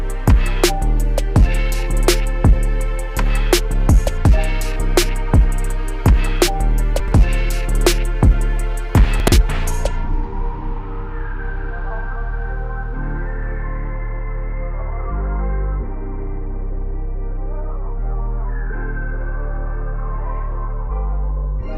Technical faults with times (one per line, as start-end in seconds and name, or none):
7.00-7.12 chunks out of order
9.20-9.32 chunks out of order